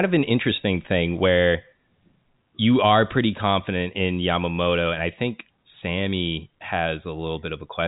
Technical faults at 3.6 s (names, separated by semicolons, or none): none